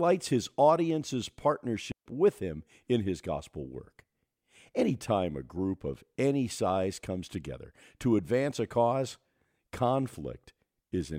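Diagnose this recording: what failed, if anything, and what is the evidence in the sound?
Digital wireless dropout in the radio link. A clean 140 ms hole at 1.92 s, before "with him in his": the receiver muted on lost data.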